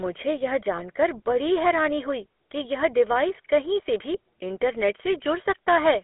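GSM full-rate codec damage runs through the whole clip. The speech is squeezed into a 250 Hz to 3.4 kHz line band and rebuilt from a vocal-tract model driven by sparse, evenly spaced pulses. That gives a plainly audible buzzy, gravelly roughness consistent with a 13 kbps codec.

Lost GSM frames cause a brief glitch from 0.76 to 0.79 s, short enough to suggest a single 20 ms frame went missing. The decoder filled the gap by repeating the last good frame's settings, which produces a momentary rough, metallic ring.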